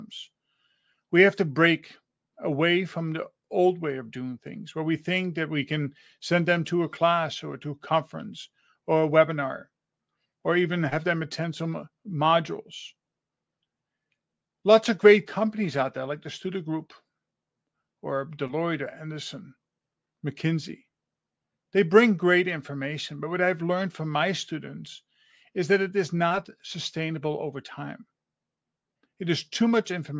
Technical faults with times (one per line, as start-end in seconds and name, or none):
none